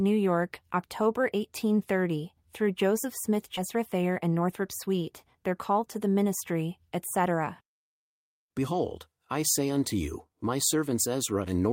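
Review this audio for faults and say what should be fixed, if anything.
A skip ahead occurs at 3.57 to 3.59 s. About 0.7 s of speech is gone. Audio was dropped, in transit or by the jitter buffer, while later packets were already waiting. Playback jumps forward with no fill, so the two sides join almost directly.

A jitter buffer speed-up runs from 3.75 to 6.06 s, ending just before "ministry etc". The buffer held excess delay. It trimmed short pitch-period pieces repeatedly, removing roughly 150 ms. Speech plays at 106% speed with unchanged pitch and sounds hurried.

Tuning the jitter buffer to absorb packet bursts and drain excess delay gradually should prevent them.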